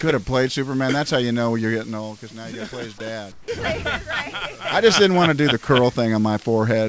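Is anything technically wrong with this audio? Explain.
Yes. From 3.32 to 3.48 s, about 160 ms, there's comfort noise in place of the background: the real background drops out for a flat, featureless hiss about 10 dB quieter. It's likely discontinuous transmission pausing the sender, with the receiver filling that gap with synthetic noise.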